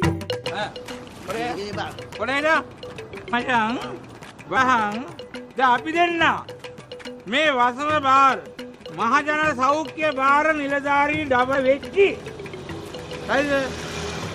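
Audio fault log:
3.32, 4.55, 8.45, 11.54 and 13.21 s: compressed frames skipped. The sound jumps ahead, by roughly 400 ms at 3.32 s and 100 to 150 ms elsewhere. The gaps fit whole 23.2 ms frames being dropped.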